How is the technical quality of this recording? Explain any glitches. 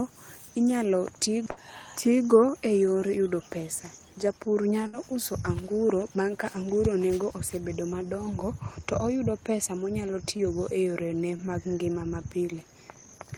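The speech has four dropouts caused by network packet loss.

At 1.51 to 1.59 s and 4.87 to 4.95 s there is a burst of packet loss. Each time the receiver carries on the last sound for about 53 and 62 ms, turning it down. Then about 60 ms of speech is skipped and playback resumes further on.

At 10.37 to 10.41 s and 11.37 to 11.41 s there is short concealed packet loss. About 20 ms of audio arrived too late. The decoder extended the preceding sound for about 19 ms and blended back into the real signal. Each is heard as a brief smear.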